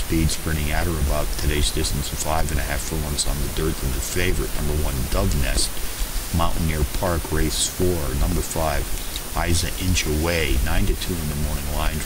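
The audio has periodic USB or driver dropouts from 0.07 to 11.8 s: tiny gaps of roughly a millisecond filled with silence every 0.25 s, heard as steady ticks.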